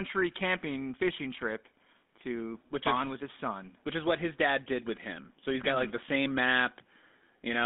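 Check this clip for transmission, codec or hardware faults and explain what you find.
The clip has one codec fault, present from start to finish: GSM full-rate codec damage. The speech sits in a telephone band of roughly 200 Hz to 3.6 kHz, with nothing above. The coder models the vocal tract with a short-term filter and excites it with a decimated, regularly spaced pulse sequence, consistent with the 13 kbps full-rate scheme. That coarse excitation is plainly audible as a buzzy, gravelly roughness laid over the speech throughout.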